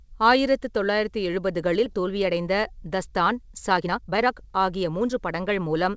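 At 1.86 to 1.88 s the speech lurches forward with no gap, roughly a second of it missing and the two sides butted together: a skip ahead, where audio was discarded while later audio already waited. From 1.98 s to 5.84 s the speech then sounds hurried at unchanged pitch, running about 18% fast. This is a jitter buffer speed-up, trimming short pitch-period pieces again and again to shed excess delay, around 0.7 s in all. The audio also stops at 8 kHz, consistent with a G.722 call path at 64 kbps.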